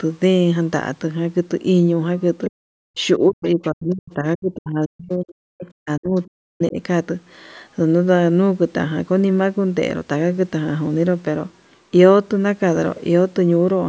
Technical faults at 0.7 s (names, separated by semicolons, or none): none